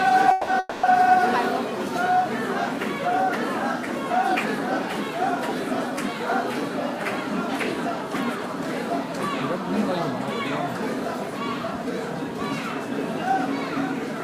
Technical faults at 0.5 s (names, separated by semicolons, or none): long network dropout